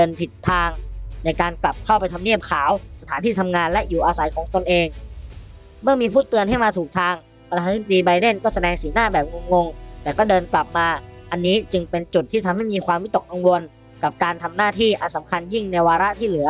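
Nothing in this one trips the ear, with no dropouts, clicks, glitches or other technical faults anywhere along the way.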